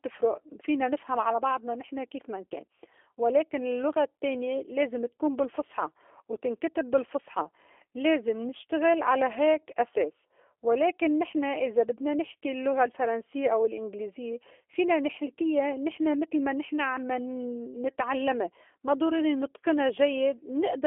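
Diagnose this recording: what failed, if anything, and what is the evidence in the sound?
What failed is the codec stage: the speech went through a G.729 codec for the whole clip, and the damage is plainly audible. The band is telephone-narrow, roughly 300 Hz to 3.4 kHz, with nothing at all above 3.6 kHz. The speech has that rough, slightly synthetic buzz you get when a coder rebuilds the sound from a vocal tract filter, a pitch predictor and a few pulses per frame, which fits an 8 kbit/s G.729A-style coder.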